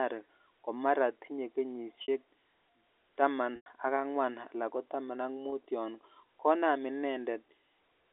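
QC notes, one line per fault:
2.02–2.08 s, 3.56–3.66 s, 5.50–5.52 s, packet loss with pitch repetition: brief buzzy, held tone at each gap, longest and fading toward silence at 3.56 s. The receiver repeated the last pitch period to cover 60, 100 and 20 ms of lost audio.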